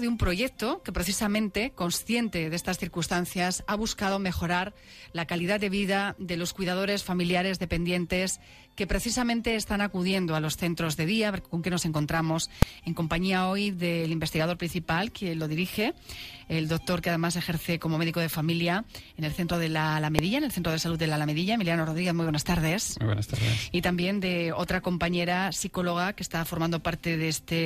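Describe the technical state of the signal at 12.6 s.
At 12.62 s there's a single sharp bang, and it's invalid numbers at full scale: a calculation blew up to infinite or invalid values that got clamped to the maximum level. It lasts about 2.9 ms, which fits a 128-sample processing block, so it's too short to hear separate edges.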